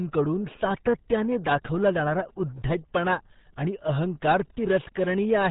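From start to finish the speech carries RealAudio 14.4 codec damage: nothing passes above 3.8 kHz, and heavy low-rate coding leaves it muffled and gargly, fitting an 8 kbit/s dial-up codec. Unlike a simple telephone band-limit, the gargling comes from coarse coding, not filtering alone.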